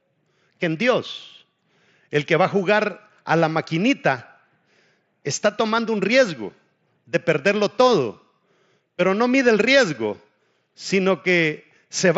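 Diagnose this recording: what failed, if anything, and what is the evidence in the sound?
The fault is concealed Bluetooth headset packet loss on the wireless link between headset and phone, heard through the light graininess of the mSBC headset codec. At 5.77 s about 7.5 ms of speech drops out. The receiver fills it with a repeated stretch of recent waveform. The gap fits a single lost packet and is nearly hidden.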